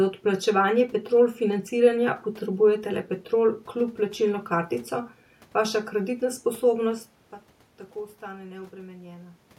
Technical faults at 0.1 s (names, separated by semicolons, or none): none